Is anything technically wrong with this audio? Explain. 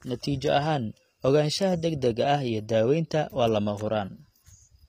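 Yes. Throughout, the speech carries the sound of HE-AAC compression, likely a low-bitrate v2 stream near 24 kbps. The upper band is rebuilt by copying lower spectrum upward, so sibilants turn gritty and lispy, and nothing appears above 15.4 kHz. Unlike a plain low-pass, the treble stays bright but sounds synthetic.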